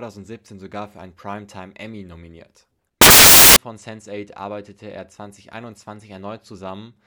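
From 3.01 s to 3.56 s, the reader assembles each sample from the wrong bytes, so the rapidly fluctuating low-order bits land in the high-order positions. The speech turns into a burst of loud, harsh broadband noise for about half a second, close to white on the louder sounds.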